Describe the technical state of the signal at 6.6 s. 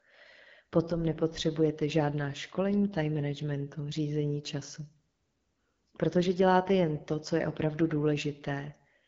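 At 6.6 s the speech is carrying AMR wideband (HD Voice) codec damage, present across the whole clip. A low-rate vocal-tract model with pulse excitation makes the voice rough and raspy, which fits a low rate near 9 kbit/s. Unlike narrowband AMR, the band reaches about 7.6 kHz rather than 3.4 kHz.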